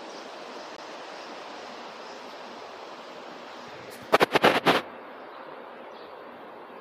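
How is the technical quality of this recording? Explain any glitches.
There's one glitch, right near the start: a CD skip at about 0.77 s. You hear a little tick and a tiny dropout, roughly 20 ms of silence, and then the sound picks up from a different spot rather than where it left off. That's what happens when the player's laser gets knocked or hits a flaw and lands on another turn of the disc's spiral. It mutes briefly while it relocks and carries on from the new position, so there's an abrupt discontinuity in the audio.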